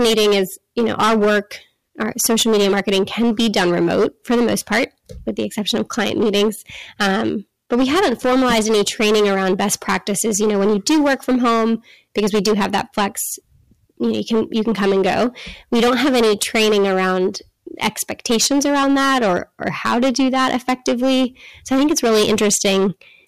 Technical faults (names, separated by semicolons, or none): hard clipping